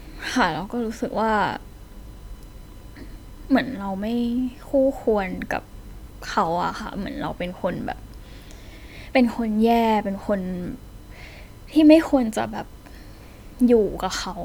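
From start to finish, a steady USB whine at 1 kHz sits under the speech, with its energy concentrated at that fundamental. The 1 kHz rate matches the USB bus's 1 ms frame timing: current drawn in bursts at each frame couples into the audio path through a shared power rail or ground. The tone holds a fixed pitch roughly 40 dB below the speech, so it is quiet.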